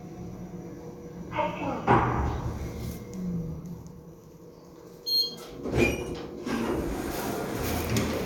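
Nothing stood out as faulty on listening to this recording of everyday sounds.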